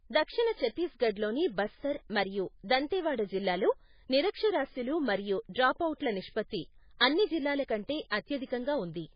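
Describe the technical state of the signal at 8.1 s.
At 8.10 s there is pre-echo: a brief hiss of about 18 ms sits just ahead of a sharp attack, which then sounds soft and smeared. Quantisation noise budgeted for the loud onset has spread back across the quiet moment before it within the same transform block. Unlike a click, the disturbance is diffuse noise leading into the attack, not a single spike.

Around that moment, as across the whole clip, the speech is heavily band-limited, with nothing above 5 kHz, and has a watery, swirling texture. The likely cause is MP3 compression at a very low bitrate, plausibly around 16 kbps. Unlike a plain low-pass filter, weak frequency lines flicker on and off between frames, which produces the swirl.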